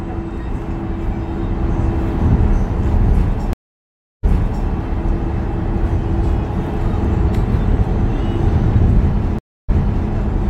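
At 3.53 s and again at 9.39 s, a stream reconnect drops the sound into silence, about 0.7 s and then 0.3 s, before a fresh decoder resumes it roughly 0.44 s and 0.42 s earlier, repeating material. Waveform and spectrogram show a flat blank gap, then a replayed section.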